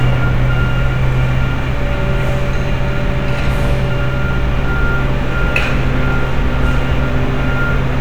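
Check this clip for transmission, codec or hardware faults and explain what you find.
One hardware fault is present, running through the whole clip. Sample clock jitter throughout: the converter's clock wanders by around two microseconds, so samples land slightly early or late, adding hiss about 45 dB below the signal that grows on loud, bright passages.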